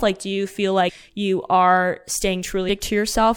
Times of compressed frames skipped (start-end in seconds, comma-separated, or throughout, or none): 0.88, 2.68